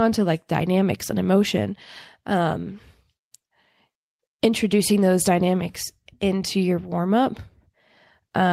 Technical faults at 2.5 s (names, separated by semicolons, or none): none